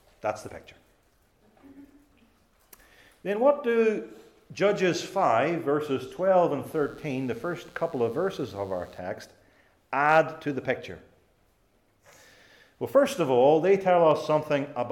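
The audio carries a mains buzz from 6.66 to 8.99 s. It is a steady, raspy tone built on 60 Hz, with harmonics climbing into the kilohertz range. It sits roughly 35 dB under the main sound. Sharp switching spikes, probably from a dimmer, rectifier or poor shielding, cause it.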